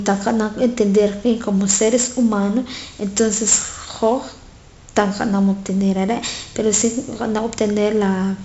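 4-bit ADPCM compression runs throughout this speech clip, damaging it heavily. Each sample is coded as a coarse 4-bit step from a predicted value, so the quantisation error becomes a broadband gritty hiss that rises and falls with the level of the speech, and sharp onsets smear where the adaptive step cannot grow quickly enough. Nothing is present above 7.7 kHz, which dulls the top end and points to a reduced sample rate, with a bitrate of about 64 kbps.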